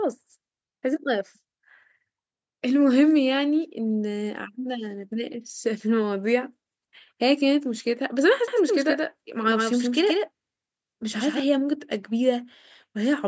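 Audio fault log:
8.48–11.40 s, doubled audio track: A second full-band copy of the speech trails the original by roughly 150 ms, about 5 dB quieter. It carries no room colour and starts and stops abruptly. A slower second capture path is the likely cause.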